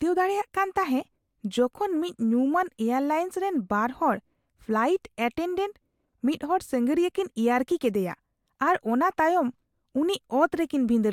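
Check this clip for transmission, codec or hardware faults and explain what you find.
No transmission, codec or hardware faults turn up anywhere in this speech recording.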